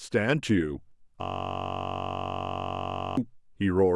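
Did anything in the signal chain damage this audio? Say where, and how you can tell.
Yes. At the driver or buffer stage, a system hang loop runs from 1.22 s to 3.17 s. The speech gives way to a steady buzz because one 21.33 ms slice repeats exactly, about ninety times, at 46.9 Hz, which fits a 512-sample ring buffer replayed while the system stalled. On the waveform, one identical cycle tiles the whole span. On the spectrogram, a rigid comb of harmonics spaced 46.9 Hz apart replaces the speech's moving formants.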